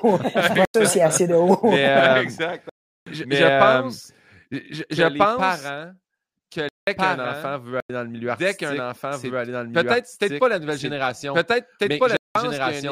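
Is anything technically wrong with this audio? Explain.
Yes, there are two faults. Throughout the speech, a doubled audio track is present: a slower path likely captured the signal twice, so an equally loud, dry copy trails roughly one and a half seconds behind.

Blocks of digital silence occur at 0.65 s (93 ms), 2.69 s (372 ms), 6.69 s (186 ms), 7.80 s (93 ms) and 12.17 s (186 ms). Output buffers went unfilled, which fits blocks of 4096 to 16384 samples. Each produces a short hole.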